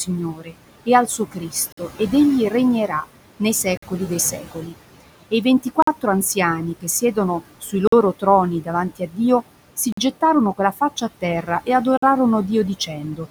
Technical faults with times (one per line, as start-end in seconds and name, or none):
0.00-13.31 noise suppressor artifacts
0.05-4.74 speech cut by the noise suppressor
1.72-1.77 gap between chunks
3.77-3.82 gap between chunks
5.31-9.18 speech cut by the noise suppressor
5.82-5.87 gap between chunks
7.87-7.92 gap between chunks
9.92-9.97 gap between chunks
10.21-11.68 speech cut by the noise suppressor
11.97-12.02 gap between chunks
12.79-13.20 speech cut by the noise suppressor